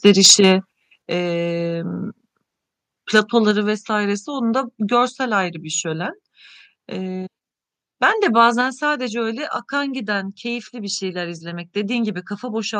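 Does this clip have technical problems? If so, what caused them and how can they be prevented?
Yes. From 0.06 to 0.52 s and 3.15 to 3.19 s, peaks are squared off, about 4 dB and about 2 dB over full scale. This is likely microphone overload. Lower the input gain so peaks stay below the converter's limit.

At 1.02 s, 3.51 s and 8.61 s, speech and background drop suddenly, by about 5, 3 and 3 dB. The likely cause is the call software stepping the microphone volume down. Set the level correctly beforehand and disable automatic gain adjustment.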